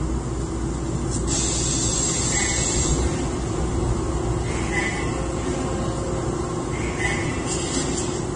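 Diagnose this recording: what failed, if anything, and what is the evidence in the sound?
The codec stage failed: the audio was most likely passed through several lossy encoders in turn, a case of transcoding between lossy codecs. Throughout the clip nothing sounds above about 9.7 kHz, and the mix of different codec artefacts heard together points to a chain such as Vorbis near 36 kbit/s, then Opus near 24 kbit/s, then AAC-LC near 32 kbit/s. Each encoder wasted bits re-coding the previous one's damage, stacking their distortions while the narrowest bandwidth set the ceiling.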